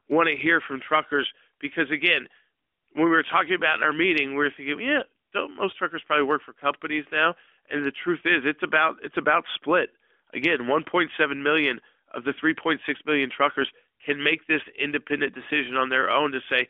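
There are no technical faults in this speech clip to describe in time order.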